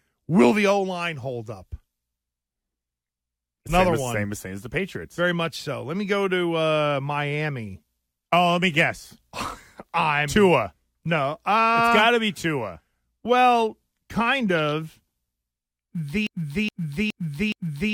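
A speech recording that ends in a broken-record loop: from 16.27 s to the end at 17.94 s, the playback or streaming path likely stalled and kept resending the last fragment it had buffered. The result is a single 0.42 s slice of audio repeating exactly, back to back, four times, with no change between passes. Whatever speech should have followed in those final seconds is missing and is replaced by this mechanical stutter.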